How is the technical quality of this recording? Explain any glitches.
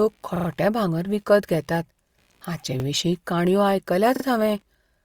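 The recording has two faults. A faint computer activity noise runs underneath, and the speech stutters with a repeated buffer three times.

The computer activity noise lasts the whole clip. It is a low buzz pulsing at roughly 70 times a second, far below the speech. Load changes in the computer shift the ground that the audio circuit shares. That puts a small current into the signal path. The buzz rises and falls with the machine's activity, not with the talking.

The repeated buffer fault occurs at 0.36 to 0.48 s, 2.8 to 2.84 s and 4.16 to 4.24 s. Fresh audio missed its deadline, so the device replayed the piece it had just played. The repeats fit a 40 ms buffer. The first stutter repeats three extra times, the second once and the third twice. Each join is abrupt. This gives a brief, machine-like stammer. Little or no audio seems to be lost.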